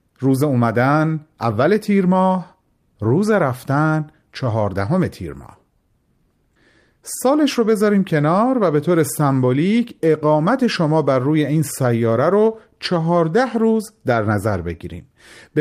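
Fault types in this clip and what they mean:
No audible faults detected.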